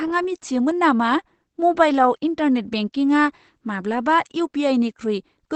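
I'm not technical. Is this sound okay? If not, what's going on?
No. Opus compression runs throughout: the speech sounds muffled and hoarse, with nothing above about 8.7 kHz, likely because a speech-focused encoder squeezed it hard.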